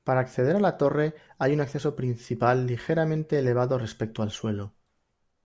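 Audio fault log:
No fault is heard in this speech clip.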